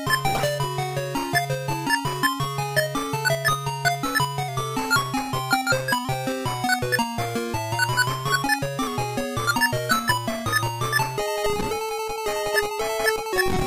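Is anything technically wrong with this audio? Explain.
Yes. From 4.48 to 6.05 s and again from 8.87 to 9.54 s, the audio runs 5.72% slow and sinks about a semitone (102 cents) before returning. This is likely a drift correction step: clock-matching software lowered the playback rate abruptly to rebalance its buffer, moving speed and pitch together.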